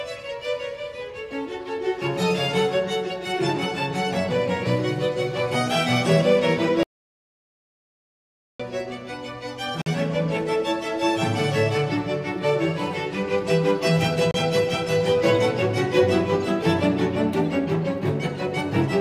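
From 6.83 to 8.60 s the sound cuts off into dead digital silence with no room tone for about 1.76 s, then comes back mid-flow. This is an audio dropout to silence, likely from an input lost while the recorder kept writing silence. At 9.82 s and 14.31 s two short holes follow, about 46 ms and 31 ms long, and the sound resumes as though it had played on through them. These are Bluetooth dropouts, likely from wireless packets arriving too late and being discarded, and their lengths fit two or three lost frames each.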